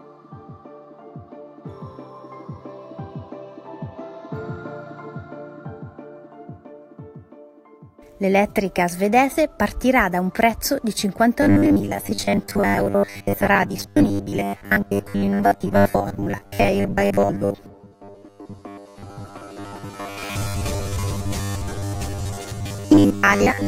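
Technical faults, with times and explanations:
11.42 to 23.67 s, robotic sound from repeated short buffers: fresh audio likely stopped arriving often enough, so the playback side kept filling the gaps by looping the last few milliseconds while the real material was skipped, with most of this stretch made of such repeats. The 100 Hz buzz fits a 10 ms buffer cycling over and over, which stamps a fixed, metallic drone on the sound that only loosely tracks what should be heard.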